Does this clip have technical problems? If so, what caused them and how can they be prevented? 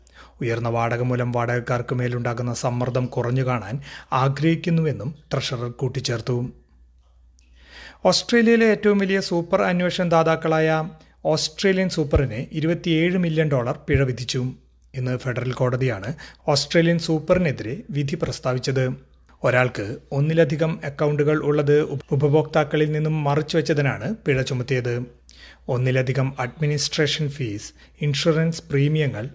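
No, I can't hear any technical problems here.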